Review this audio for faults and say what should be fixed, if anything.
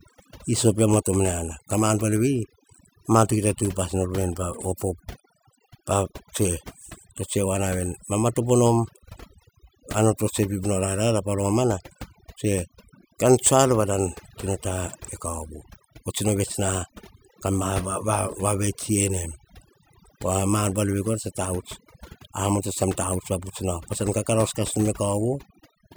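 Overdone noise removal runs throughout the recording. A noise reduction stage set far too aggressively is pulling individual frequency bands down hard, or out entirely, whenever their level sits close to its estimate of the background noise. The quieter components of the speech fall into that range and get stripped along with the noise, while the pauses collapse into near silence dotted with twinkling specks. Keep noise reduction gentle, setting its strength just high enough to tame the background and checking the quiet passages of speech for those artefacts before committing.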